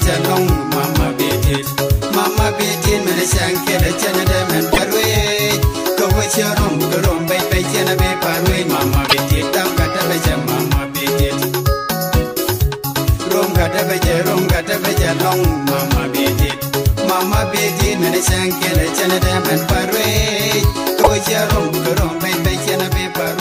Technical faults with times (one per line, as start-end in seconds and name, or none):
4.72-4.79 broken MP3 bit reservoir
9.08-9.14 broken MP3 bit reservoir
21.02-21.07 broken MP3 bit reservoir